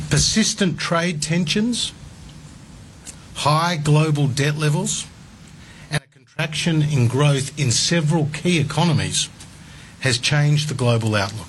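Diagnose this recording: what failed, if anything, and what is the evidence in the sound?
Audio dropout to a faint residue, 5.98 to 6.39 s. The sound abruptly drops to a faint leak far below normal. Likely an intermittent analogue connection.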